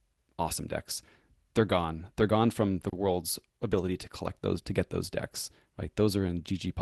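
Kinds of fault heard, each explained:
Short stall from a late packet: at 2.89 to 2.95 s, just after "gone from the", a packet arrived too late and the receiver's jitter buffer ran empty. The receiver stretched the last sound to bridge about 30 ms until the packet came, then carried on from the same point. Nothing is skipped, but that sound is held slightly too long with a slight buzz or dip, and everything after it plays about 30 ms later.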